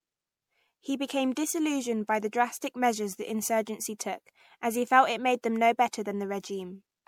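The speech appears to have been likely passed through MP3 coding around four times, which fits a 96 kbit/s chain, giving generation loss across the whole clip: each re-encode quantises on a shifted frame grid, so the voice turns swirly, smeared and hollow, with consonant attacks blurred.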